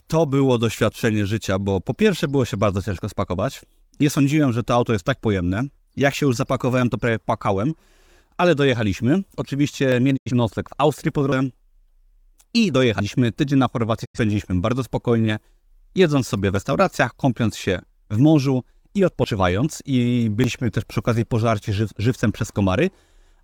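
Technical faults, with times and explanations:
9.92, 11.32, 13.0, 16.56, 19.24 and 20.44 s: the speech jumping ahead, around 40 ms gone each time and more like a tenth of a second at 11.32 s, likely a dropped buffer (overrun).
10.16 to 10.31 s and 14.04 to 14.19 s: digital broadcast dropout. The speech fades out over about 20 ms and mutes for roughly 85 ms, which fits a couple of lost frames.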